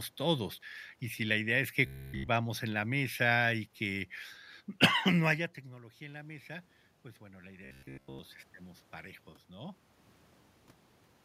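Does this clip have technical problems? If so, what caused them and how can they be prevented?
Yes, there are two kinds of problem.

Robotic sound from repeated short buffers appears twice. The first runs from 1.86 to 2.28 s, between "si la idea es" and "en la mesa y". The second runs from 7.65 to 8.19 s. Both carry a fixed buzz near 66.8 Hz. That rate fits a buffer about 15 ms long, replayed over and over. Almost nothing new gets through in those stretches. The likely cause is audio arriving too late, so the software loops its last buffer. To prevent it, give the audio path a larger jitter buffer and keep the capture thread from being starved of CPU time.

Automatic gain rising follows "no haya" and runs from 5.7 to 8.39 s. The talker moved away around 5.0 s, and the input fell by about 17 dB. The gain control responded by slowly raising its gain by about 6 dB. The voice and the room noise swell up together over that span. 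To prevent it, keep the talker at a steady distance from the microphone or set a fixed gain instead of automatic control.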